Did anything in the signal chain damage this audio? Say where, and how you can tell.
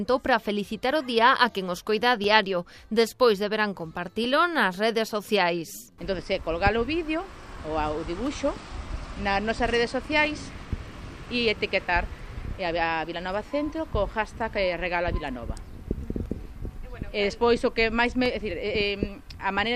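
Yes. At the driver or buffer stage, periodic USB or driver dropouts produce ten or so ticks at a steady 2.0 s spacing from 0.24 s to 18.26 s. Each loses about a millisecond to silence. Clockwork regularity separates this from irregular network packet loss.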